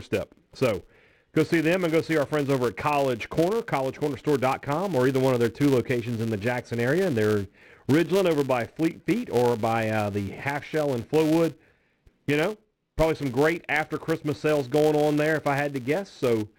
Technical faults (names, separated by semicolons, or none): filter restarted on every block